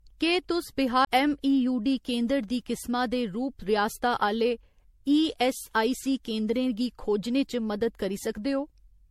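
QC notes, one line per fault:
Throughout: generation loss. Speech sounds swirly, smeared and hollow, with blurred attacks and nothing above 16.4 kHz. Likely from about seven MP3 re-encodes, fitting 64 kbit/s.
1.05 to 1.07 s: CD skip. A tick and a roughly 20 ms mute, then the speech jumps to another point as the laser leaves its track.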